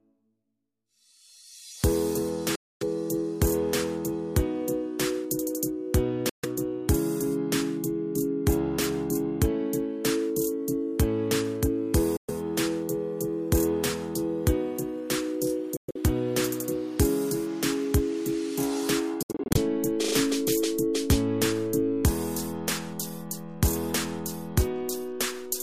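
Packets likely failed to reach the headphones in time, a Bluetooth dropout, cutting the sound to silence at 2.55 to 2.83 s, 6.29 to 6.45 s and 12.17 to 12.30 s, then in broken, stuttering gaps at 15.77 to 15.96 s and 19.23 to 19.57 s, each resuming as if it had played on.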